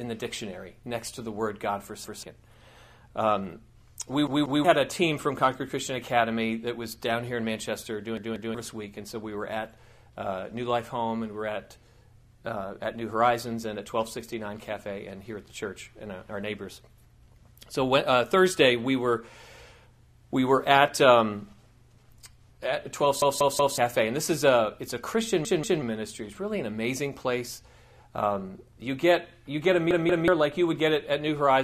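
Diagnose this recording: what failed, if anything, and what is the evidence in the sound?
The failure is at the driver or buffer stage: a repeated buffer. A block of about 186 ms, which fits an 8192-sample buffer, plays again with a hard join at each repeat, heard as a stutter. It repeats once at 2.04 s, twice at 4.27, 8.17, 25.45 and 29.91 s, and three times at 23.22 s. New audio missed its deadline, so the device replayed the last block. Each event loses roughly a fifth to half a second of sound.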